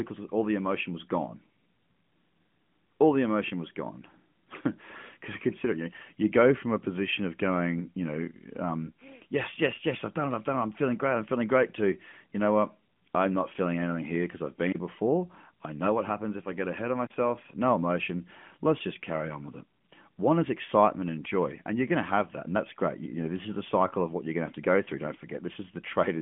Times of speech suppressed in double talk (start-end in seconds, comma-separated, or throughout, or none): none